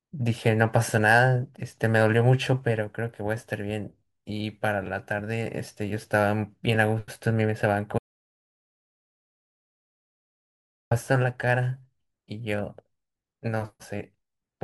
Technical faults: audio dropout to silence

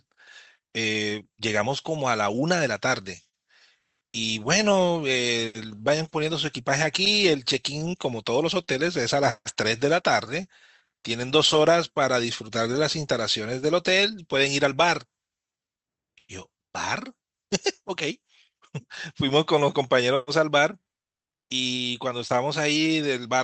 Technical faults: clock drift between sender and receiver; repeated timing corrections; short stall from a late packet; scattered short gaps

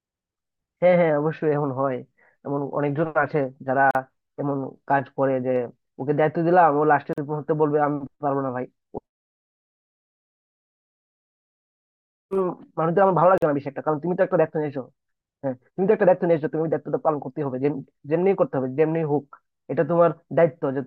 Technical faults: gap at a join of encoded pieces

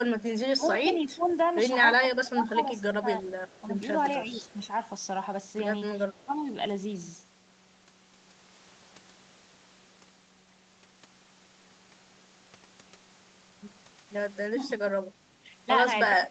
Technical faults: speech suppressed in double talk; echo leak; background gated by the echo canceller

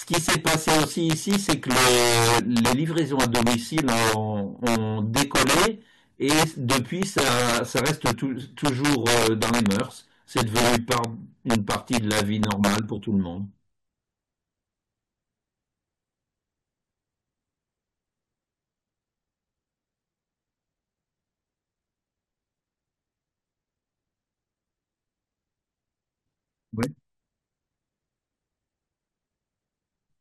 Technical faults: integer overflow; damaged data in a compressed stream

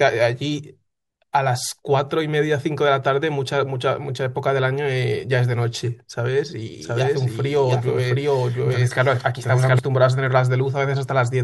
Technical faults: doubled audio track

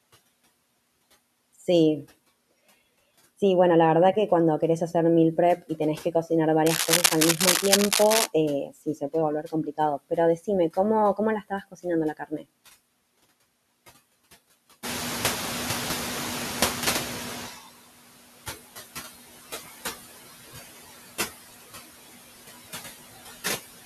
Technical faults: noise suppressor artifacts; cable scratch noise; speech cut by the noise suppressor; noise suppressor catching up

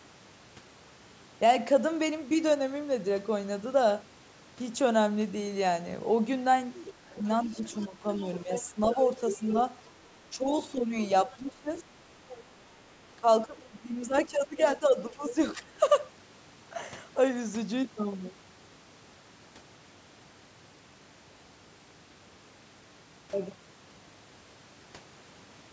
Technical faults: other side's voice leaking through; speech suppressed in double talk

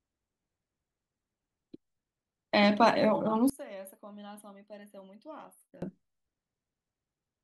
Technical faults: one channel inverted

